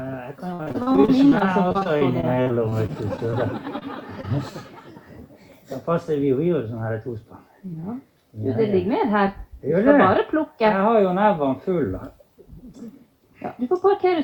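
From 0.53 to 3.34 s the audio turns choppy, with pieces missing. This is repeated packet loss: a couple of dozen holes, the longest 57 ms, each patched by extending the preceding sound, so about a fifth of that stretch is concealment.

Two brief smears follow, at 3.78 to 3.83 s and 4.21 to 4.25 s. Each is a short concealed packet loss in which about 20 ms never arrived in time and was filled by continuing the last sound before blending back.

Between 6.87 and 7.17 s the sound hurries forward at 109% speed with unchanged pitch, and runs slightly faster again from 8.74 to 9.75 s at 103%. This is jitter buffer speed-up, which trims pitch-period slices, removing about 40 ms in all each time to reduce excess delay.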